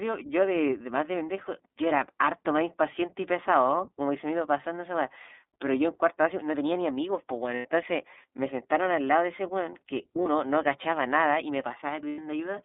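Throughout the speech the sound is thin and boxy, clear enough but slightly rough and synthetic, with nothing above about 3.6 kHz and little below 250 Hz. That is the iLBC codec at work. It squeezes the voice into a narrow telephone band and rebuilds each 30 ms frame's excitation independently. The coding damage is plainly audible, and its roughness fits the 13.33 kbps mode.

Three times the voice briefly turns into a held, faintly buzzy, breathy vowel: from 7.56 to 7.65 s for about 90 ms, from 10.23 to 10.27 s for about 30 ms, and from 12.09 to 12.19 s for about 90 ms. These are lost iLBC frames. The decoder fills each gap by repeating the last pitch cycle mixed with noise. Because each frame stands alone, the voice snaps back cleanly once audio resumes.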